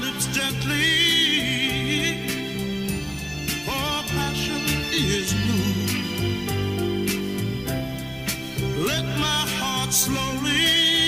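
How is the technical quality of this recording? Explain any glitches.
No glitches can be heard anywhere in this recording. Nothing breaks into the sound at any point.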